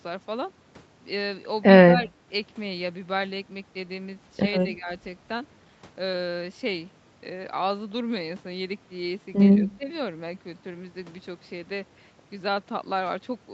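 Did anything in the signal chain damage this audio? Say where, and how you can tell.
Yes. In the call processing, the echo canceller likely could not tell this talker from loudspeaker echo while both sides spoke, so it turned the speech down (speech suppressed in double talk). The speech dips briefly at 1.9–2.15 s (about 15 dB), 4.77–4.89 s and 9.61–9.88 s (about 10 dB each). The call's microphone filtering, which leaves nothing above 8 kHz, is not part of that damage.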